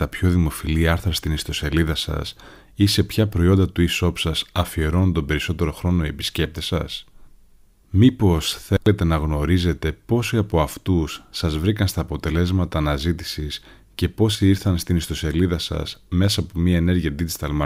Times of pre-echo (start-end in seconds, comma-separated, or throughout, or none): none